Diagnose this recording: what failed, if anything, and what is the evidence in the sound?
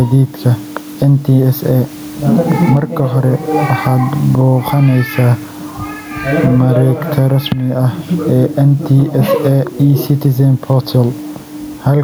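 Gain pumping throughout. Level ducks about 10 dB under loud speech. Likely excessive input gain hitting a fast call-processing limiter.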